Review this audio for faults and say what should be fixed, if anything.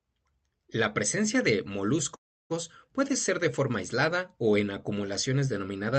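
A call audio freeze, likely from packets stalling until the jitter buffer ran empty, halts the speech from 2.15 to 2.52 s, right after "presencia de". The last sound fades as a brief buzz or hiss into 0.32 s of silence. Speech then resumes where it stopped, with nothing lost but everything 0.35 s late.

To prevent it, give the jitter buffer enough adaptive headroom to absorb such delay spikes, and improve the network route so packets are not held up.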